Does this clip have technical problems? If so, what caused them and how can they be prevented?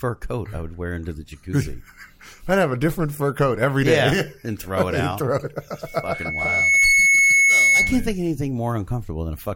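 Yes. From 5.86 to 8.07 s a piercing 2.2 kHz tone swells over about a second until it sits roughly 10 dB above the rest of the sound. This is loudspeaker feedback squeal: the microphone picked up its own loudspeaker, and at 2.2 kHz the loop gain went above one, so that tone fed on itself. It can be prevented by keeping microphones out of the loudspeakers' coverage, lowering monitor gain, or notching 2.2 kHz.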